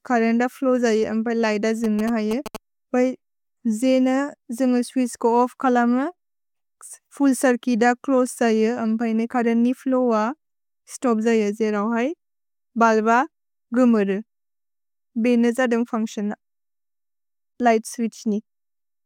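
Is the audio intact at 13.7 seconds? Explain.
Yes, the audio is intact at 13.7 seconds.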